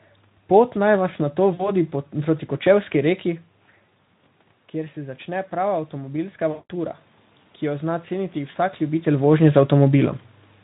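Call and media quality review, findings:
Packet loss concealed by the speech codec, 1.53–1.71 s: speech briefly smeared into a buzzy, fading tone, about 60 ms missing, fits three lost 20 ms frames. Again 6.51–6.72 s, longer, about 180 ms gone, so the extrapolated sound decays further and the voice stays rough after audio returns. Single short dropout at 8.51 s, one frame's worth. Decoder repeats last pitch and filter, lowering gain each frame. Component: network path plus decoder concealment.

Automatic gain rising, 4.71–7.00 s: voice and room noise swell together, gradual, roughly 4 dB of added gain chasing an input that fell about 12 dB. AGC in the capture chain reacting slowly to a quieter source. Overlaps the 6.51 s dropout, so that concealment lands mid-ramp. Talker movement near 3.5 s and 8.5 s reads as natural level shifts; Speex at 15 kbps adds only light hoarseness.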